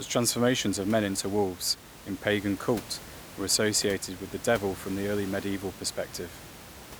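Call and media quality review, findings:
Nothing to flag here, just a bit of room noise sitting about 17 dB under the speech, which is part of the recording rather than anything the system did.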